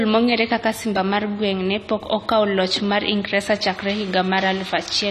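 A speech recording, likely encoded with AAC-LC at a low bitrate, something in the region of 32 kbps to judge by the damage. Throughout, there is nothing above 14 kHz, and the coarse quantisation leaves the voice dull and smeared, with plainly audible warbling and fizz on sibilants. From 3.66 s to the end, linear timecode has bled in from a neighbouring track or cable. Its square wave, switching near 1 and 2 kHz and consistent with 29.97-frame code, sits roughly 25 dB below the speech as a steady chirping warble behind it.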